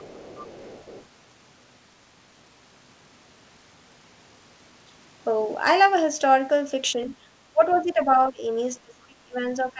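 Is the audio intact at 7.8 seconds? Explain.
No. From 7.49 s to the end, the speech drops by up to roughly 25 dB in pieces, likely speech suppressed in double talk as the echo canceller ducked everything. Just before, at 7.71 to 7.78 s, a faint scrap of the other side's voice leaks through about 30 dB down, likely residual loudspeaker echo the canceller missed.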